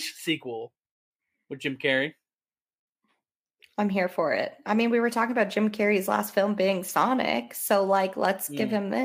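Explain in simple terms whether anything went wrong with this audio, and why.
Nothing went wrong: no audible technical fault occurs anywhere in this speech recording.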